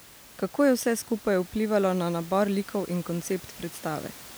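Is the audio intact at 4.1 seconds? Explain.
Yes, the audio is intact at 4.1 seconds, with only the room's own background noise sitting about 21 dB below the speech.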